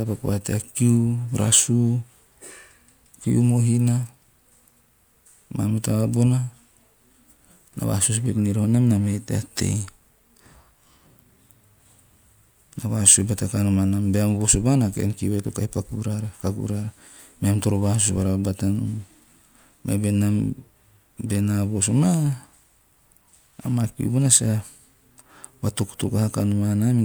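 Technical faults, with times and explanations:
No technical faults can be heard in this speech clip.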